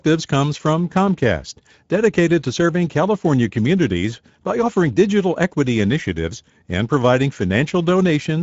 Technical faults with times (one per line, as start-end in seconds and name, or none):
0.00-8.42 Speex codec